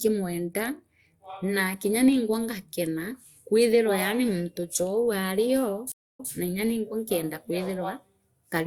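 At 5.92 s the speech cuts to silence for 244 ms, then picks up at 6.29 s from 131 ms earlier, repeating that stretch. This is a stream reconnect: the link dropped, and a new decoder restarted mid-stream from data the server resent.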